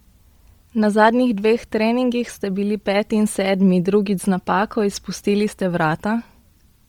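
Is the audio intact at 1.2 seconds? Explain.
No. At 1.2 seconds the speech carries a breathy, grainy edge that runs through the whole clip, likely from Bluetooth LC3 compression. Heavy coding at a rate that fits roughly 32 kbps strips the upper spectrum and refills it with noise, so a spectrogram shows a smeared, speckled top band with blocky 10 ms frame texture.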